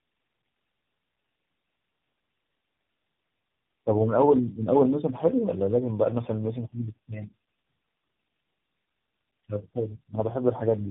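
Speech throughout, with nothing above 3.8 kHz and a rough, muffled, warbly quality beyond what one phone codec produces. This is tandem speech coding: the signal was decoded and re-encoded at each link, which fits three low-rate speech coders in a row, ending in AMR-NB.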